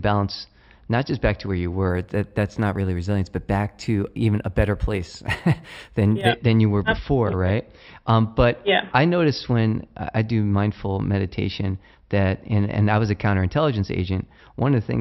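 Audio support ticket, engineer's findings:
Imaging from linear upsampling, 1.90 to 6.29 s, right after "back to where you". Top end dulled. Faint metallic shimmer on sibilants. Probable resampler stage, 12 kHz to 48 kHz by straight-line interpolation. Weak filtering leaves a mirrored spectrum at 6 to 12 kHz, around 30 dB down.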